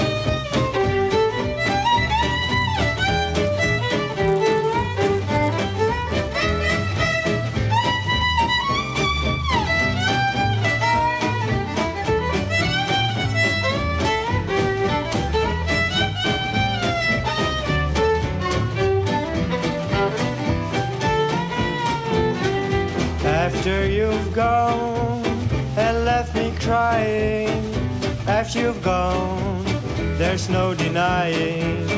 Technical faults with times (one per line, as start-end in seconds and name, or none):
2.43-6.60 resampler restarted on every block